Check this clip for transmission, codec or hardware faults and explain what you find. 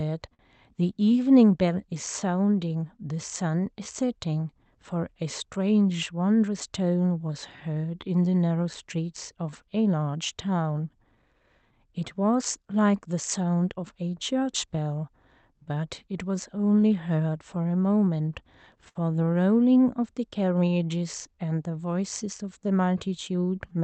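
Three related timing faults are present. The call path sounds like Opus near 64 kbps, band-limited to 8 kHz.

Clock drift between sender and receiver runs through the whole clip. The sender's clock is roughly 4 percent slow, so the jitter buffer keeps draining and must be refilled.

Repeated timing corrections run from 1.06 s to 23.79 s. The receiver repeatedly inserts short stretches, playing at about 96 percent speed and adding roughly a second overall. This is heard as a slightly dragging, unsteady tempo with small hiccups.

There are two short stalls from a late packet, at 0.34 to 0.41 s and at 18.89 to 18.97 s. Each time the buffer ran empty and the last sound was held, for 50 ms and then 66 ms. Nothing is lost, but each held sound is briefly prolonged.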